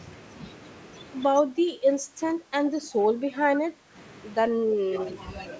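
A speech recording with two call faults. From 1.38 to 3.95 s the voice drops sharply, by roughly 20 dB at its deepest, and again from 4.54 to 4.95 s by about 15 dB. This is speech suppressed in double talk, likely from an echo canceller turning everything down while both sides spoke. Right after, from 4.94 to 5.1 s, a fainter copy of the voice trails about 120 ms behind, roughly 10 dB down. That is an echo leak, likely loudspeaker pickup the far end's canceller failed to remove. The call microphone processing limits the band, so nothing is heard above 8 kHz.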